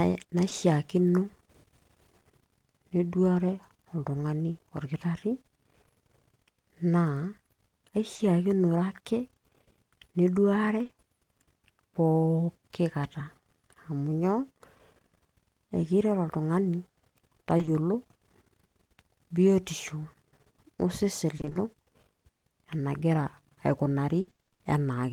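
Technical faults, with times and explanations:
0.49 s, 8.15 to 8.21 s, 10.83 to 10.91 s, short concealed packet loss: a 20 ms hole, a 40 ms hole, then two back-to-back 20 ms holes in the speech. The receiver papered over each by stretching the last bit of sound, so you get a quick smear or wobble.
17.57 to 17.69 s, 21.37 to 21.57 s, 24.21 to 24.61 s, repeated packet loss (robotic sound): holes arrive one after another, and concealment fills about half of each stretch. Because the fill keeps repeating the last sound, the speech turns choppy and robotic, worst in the final run, where one gap reaches 60 ms.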